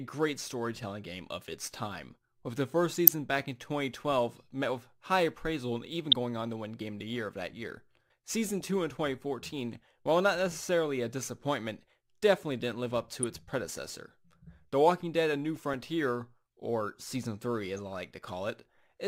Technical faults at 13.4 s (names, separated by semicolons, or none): DAB burbling